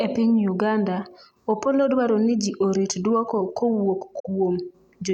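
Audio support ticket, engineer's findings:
Digital broadcast dropout at 4.19–4.29 s in the speech. Receiver muted on a corrupted or missing frame: 8 ms fade to silence, then a dead hole. The roughly 43 ms of lost audio fits a single dropped frame, plus recovery time. Waveform shows the envelope tapering to a flat line of silence, then restarting. Spectrogram shows a clean vertical blank band across all frequencies, with no smear. Audio sent during the gap is gone and cannot be recovered.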